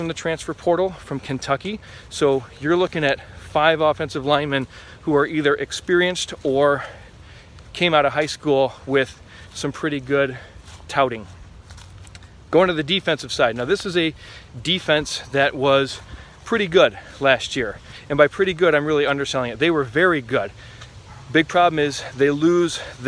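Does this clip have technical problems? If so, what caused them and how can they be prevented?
No, nothing in this clip stood out as a technical problem on listening.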